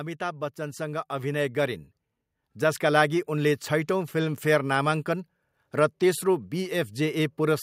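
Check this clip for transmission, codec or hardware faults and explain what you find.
One fault is present in this speech clip: automatic gain rising, from 0.18 s to 1.87 s. The automatic gain control judged the incoming level too low and stepped its gain up smoothly by about 8 dB over roughly 1.7 seconds. Voice and background noise swell together, so the room seems to creep closer. On a waveform the envelope widens steadily across that span; on a spectrogram every band, noise floor included, brightens in step.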